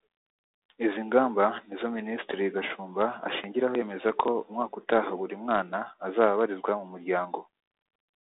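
Speech over a G.726 ADPCM path at 32 kbit/s, held to a telephone band of roughly 300 Hz to 3.7 kHz with nothing above 3.8 kHz and only light coding damage, shows no technical fault.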